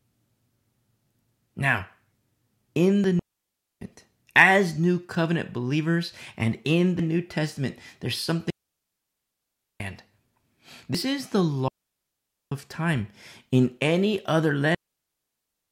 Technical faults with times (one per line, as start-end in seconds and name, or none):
3.19-3.81 digital wireless dropout
8.50-9.80 digital wireless dropout
10.95 audio missing between chunks
11.68-12.52 digital wireless dropout
14.74-15.71 digital wireless dropout
14.90 audio missing between chunks